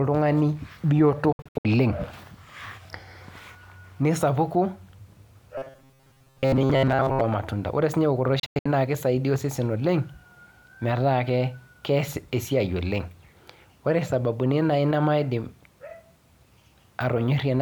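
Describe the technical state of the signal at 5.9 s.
At 5.9 s the speech is inside robotic sound from repeated short buffers, from 5.58 to 7.22 s. A block of about 7.5 ms is looped, likely because audio arrived too seldom. Unlike stutter, the repeats fuse into a rigid metallic buzz near 134 Hz.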